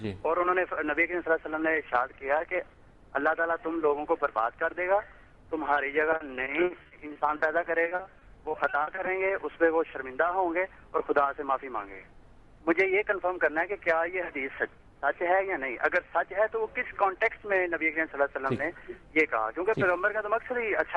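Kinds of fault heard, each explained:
Repeated packet loss (robotic sound): Audio went missing again and again in two bursts, 6.11 to 7.41 s and 7.83 to 9.31 s. Each hole was patched by stretching the preceding sound. The holes, the longest 60 ms, come so close together that the sound turns choppy and robotic.
Jitter buffer speed-up: Too much audio had built up in the receiver's buffer. To cut the delay, it dropped tiny pitch-period pieces in quick succession. From 11.43 to 12.0 s the audio plays at 108% speed and sounds hurried, with around 50 ms removed.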